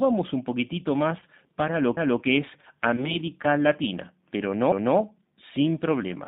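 Throughout, the G.729 codec at 8 kbit/s confines the speech to about 150 Hz to 3.7 kHz, leaving a rough, synthetic timbre. A spectrogram shows empty space above the cut-off.

At 1.20 to 1.24 s, VoIP packet loss concealed by the speech codec fills a gap that fits a single lost 20 ms packet with a brief, fading stretch of extrapolated sound. On the waveform this appears as a decaying stretch.

From 1.97 to 2.22 s, overlapping chunks replay 250 ms of audio, which points to chunks about 2.5 s long. There is an audible stutter, and the waveform shows a duplicated segment.

At 2.96 to 3.17 s, a second concealed packet loss gives a stretched, weakened sound that is slow to recover.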